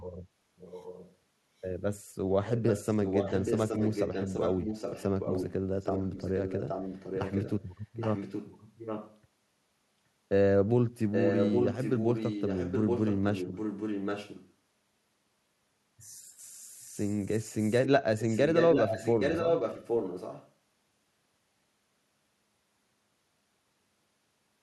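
Echo leak appears at 0.57, 2.47, 5.79, 7.94, 11.11, 16.84 and 18.18 s. Stretches last up to 3.4 s. A copy trails the speech by 0.82 s, ranging from faint to as loud as the speech. The likely cause is an echo canceller missing loudspeaker pickup.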